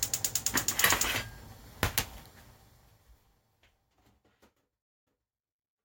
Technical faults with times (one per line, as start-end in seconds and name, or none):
4.82-5.30 stream reconnect